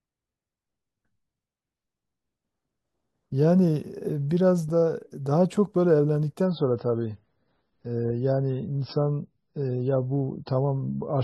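From 6.45 s the adaptive stream drops to a lower bitrate, consistent with 16 kbit/s MP3. The speech abruptly loses everything above 5.6 kHz, with no gap.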